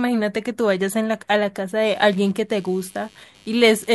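From 1.93 s to the end of the clip, a buzzing, scratchy computer activity noise sits under the speech, pulsing at roughly 100 times a second and about 30 dB below it. Load shifts in the computer's processor, graphics or mouse are disturbing the ground shared with the audio circuit. Unlike steady mains hum, it starts abruptly partway through and tracks the machine's activity rather than anything in the speech.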